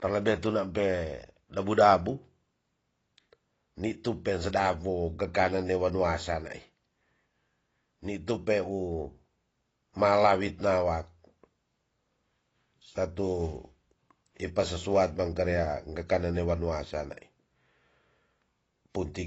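The whole clip has likely been through AAC compression at a low bitrate. Its AAC-LC-style encoder had too few bits for the full spectrum, so it discarded everything above 8 kHz and quantised the rest coarsely. The damage is plainly audible from start to finish: the speech sounds dull and smeared, sibilants lose their crispness and turn fizzy, and held sounds warble. The depth of these artefacts fits a rate of about 24 kbps.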